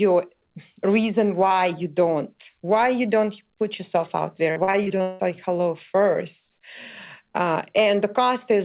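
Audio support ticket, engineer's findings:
Choppy, robotic stretch, 4.52 to 5.21 s: repeated packet loss. Seven gaps, longest 178 ms, about half the span patched by stretching the previous audio; the next hole lands before playout recovers. Suspect network or jitter buffer. Call path: band ends at 4 kHz, consistent with narrowband G.711 A-law at 64 kbps.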